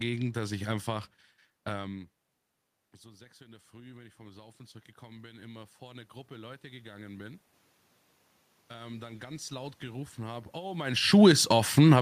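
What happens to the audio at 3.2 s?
At 3.2 s the clip is inside a stretch of automatic gain rising that runs from 3.02 to 7.47 s. After the input level fell by about 23 dB, the gain control slowly raised its gain by about 10 dB to compensate, so the voice and the room noise beneath it swell together. On a waveform the envelope ramps up gradually across those seconds. A spectrogram shows the whole band, noise floor included, brightening in step.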